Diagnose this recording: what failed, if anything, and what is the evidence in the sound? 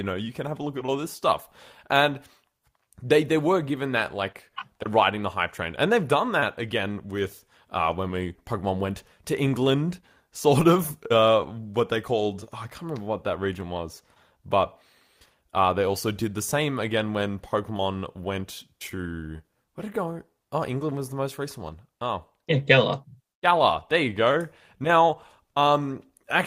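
Nothing failed; no stage shows any audible problem.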